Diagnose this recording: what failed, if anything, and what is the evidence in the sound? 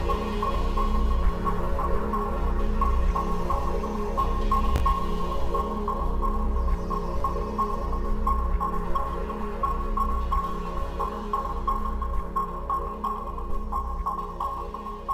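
Chunks out of order at 4.76 to 4.80 s, a buffer or packet-ordering failure: one 20 ms chunk played a chunk late, swapping two segments. It sounds like a brief jumbled moment. The waveform shows hard discontinuities at each join, and the spectrogram shows thin vertical broadband lines.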